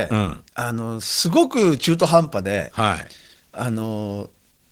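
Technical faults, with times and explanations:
Throughout: Opus voice compression. The damage is plainly audible. The speech sounds hoarse and slightly robotic, because the lower band is coded by linear prediction with a coarsely quantised excitation. Content above 8 kHz goes through a separate transform layer, so the band stays full, reaching about 20 kHz. The coarseness points to a low bitrate, roughly 16 kbps, shared across 20 ms frames.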